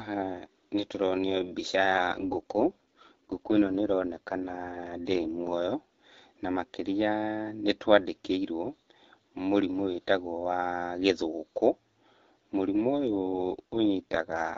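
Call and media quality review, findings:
AMR rate drop at 1.90–5.64 s and from 13.07 s to the end: speech turns rough and synthetic with the same bandwidth and no gaps. This fits AMR-WB falling to 6.6 kbit/s.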